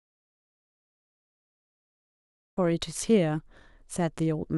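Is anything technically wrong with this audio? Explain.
Yes. The clip opens in an audio dropout to silence that lasts from the very start until 2.57 s, when the speech abruptly begins mid-flow. The likely cause is a lost input, such as a disconnected device, failed link or stray mute, while the recorder kept writing silence. The gap is dead silence with no room tone or hiss, which separates it from a quiet passage, where faint background sound would remain.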